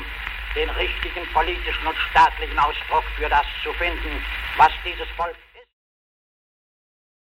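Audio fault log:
Nothing here needs flagging; the level just eases gently down from around four and a half seconds to silence by 5.75 s, the way an editor would round off a clip.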